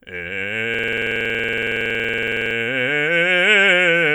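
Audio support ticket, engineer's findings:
System hang loop, 0.74–2.55 s: host or driver stalled while the audio device kept replaying its ring buffer. One 46 ms slice of the music repeats exactly at 21.5 Hz, a rough buzzing stutter that fits a 2048-sample buffer. Playback then resumes with essentially nothing skipped.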